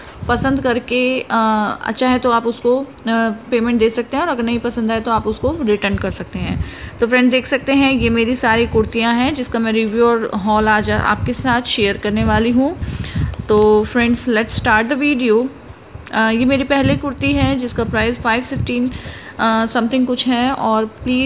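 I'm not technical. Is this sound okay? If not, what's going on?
Yes, no faults can be heard.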